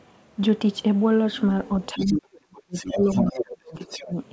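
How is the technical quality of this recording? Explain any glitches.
The recording has two connected faults in the second half, both tied to simultaneous talking on a call. The audio has nothing above 8 kHz, which fits a wideband call codec such as G.722.

Speech suppressed in double talk, 1.93 to 4.16 s: an echo canceller, likely confronted with both parties speaking at once, failed to separate the talker from the loudspeaker echo and attenuated the microphone signal. The talker's speech dips and breaks up for about two seconds in total, falling by as much as about 35 dB at its deepest.

Other side's voice leaking through, 1.98 to 2.21 s, 2.73 to 3.44 s and 3.80 to 4.03 s: residual loudspeaker echo was likely not fully cancelled. A second voice comes through in these stretches, about 5 dB below the talker in the first two and about 15 dB below in the last.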